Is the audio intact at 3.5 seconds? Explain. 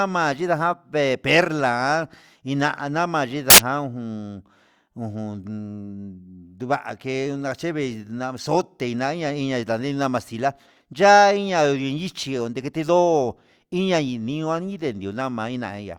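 No, not quite. From about 3.50 to 3.58 s there's a short burst of samples built from the wrong bytes. For those 80 ms the reader is assembling each sample's bytes incorrectly, whether off by one, swapped, or misaligned, so the jittery low-order bits end up as the big part of every value. The speech there is replaced by a blast of loud, harsh broadband noise.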